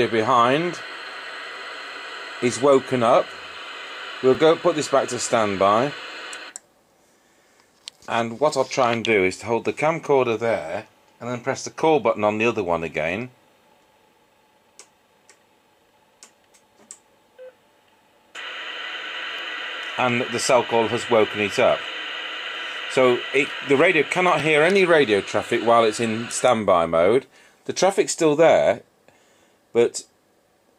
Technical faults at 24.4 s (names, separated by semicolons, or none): overlapping chunks